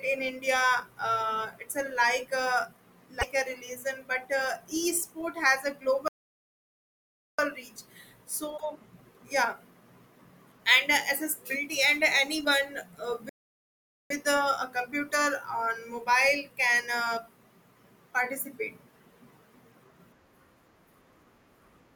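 At 3.21 to 3.23 s the speech jumps ahead, likely a broken MP3 bit reservoir: a frame went missing, and the next one reached back for borrowed bits that weren't there, which fits 24 ms frames. At 6.08 s the audio drops out for about 1.3 s, to 7.39 s, likely a playback stall where the player ran dry. The same reservoir glitch likely returns at 8.57 to 8.61 s. A second likely stall cuts the sound from 13.29 to 14.10 s, around 0.8 s of dead air before it picks back up.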